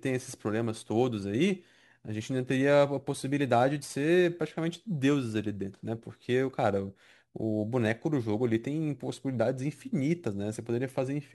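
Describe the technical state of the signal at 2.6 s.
At 2.6 s the speech carries crude rate conversion, present throughout the clip: a 48 kHz to 44.1 kHz change made by picking the nearest sample, with no filtering. Its inharmonic fizz, roughly 30 dB down, rides on loud, bright syllables rather than sitting as steady hiss.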